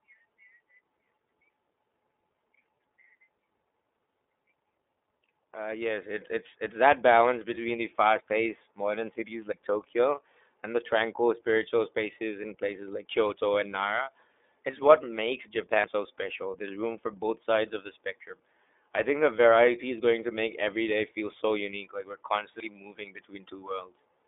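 It's a speech recording that's been through the iLBC codec the whole way: nothing gets past about 3.7 kHz, the low end is thinned below roughly 300 Hz, and the voice has that slightly rough, synthetic edge you get when each 30 ms frame is coded on its own, which fits iLBC's 13.33 kbps mode. At 9.52 s, right after "modern cities", the sound jumps ahead by something like 40 ms with no gap. That's most likely a dropped buffer from an overrun, where the samples were overwritten before the program read them and the two sides got spliced together.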